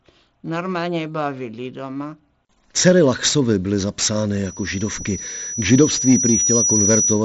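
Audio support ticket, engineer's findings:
Mic-to-speaker loop gain exceeding unity at 5.9 kHz: loudspeaker feedback squeal from 4.44 s to clip end, building over roughly 2 s to around 5 dB above the speech. Headset path band-limited near 7.7 kHz, consistent with mSBC.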